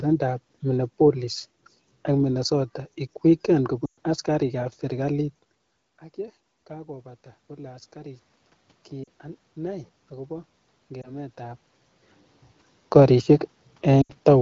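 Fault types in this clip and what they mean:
Lost AMR speech frames: Radio errors corrupted speech frames, so the wideband decoder filled the gaps by repeating its last good settings at falling level. After "ig weekend" near 3.85 s a 120 ms gap drops to near silence, with shorter dips at 9.04, 11.02 and 14.01 s.
Automatic gain rising: The gain control judged the input too quiet and turned its gain up gradually. After "ang ye", from 6.67 to 8.31 s, the input fell about 18 dB and gain climbed about 4 dB. From 9.55 to 11.68 s it rose about 3 dB, with voice and background swelling together.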